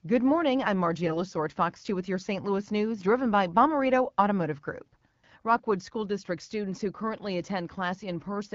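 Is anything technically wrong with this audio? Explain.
Yes. From 1.04 to 1.18 s, just after "morning I'm", the speech is hit by AMR bit errors. Over about seven codec frames, a few percent of the weakly protected bits were flipped in transit. The integrity check on the key bits still passed, so the decoder used the corrupted data. Excitation pulses landed in the wrong places. Fine pitch, gain and spectral values drifted. The voice holds its rough pitch and level but turns hoarse, scratchy and gargly for that moment. The surrounding AMR wideband (HD Voice) coding sounds clear, which fits a rate around 12.65 kbit/s.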